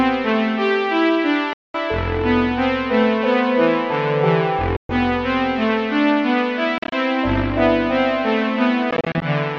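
The music cuts to silence at 1.53–1.77 s and 4.76–4.91 s, then stutters in brief gaps at 6.78–6.93 s and 8.91–9.25 s, picking up as if it played on: likely Bluetooth dropout, with late packets discarded.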